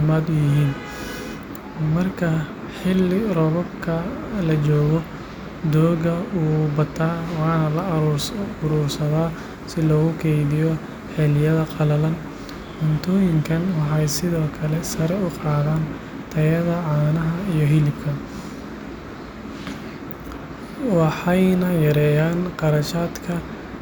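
No technical faults can be heard anywhere in the speech.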